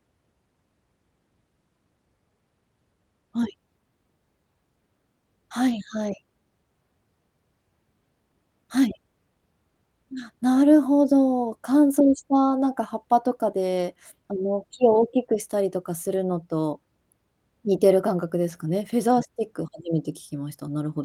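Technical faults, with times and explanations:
5.69–5.75, 13.77–13.83, 16.13–16.19 and 18.49–18.55 s: lost packet rebuilt from error correction. About 40 ms of speech in each is rougher and noisier with no gap, consistent with two lost packets replaced by low-bitrate backup copies from the following packets.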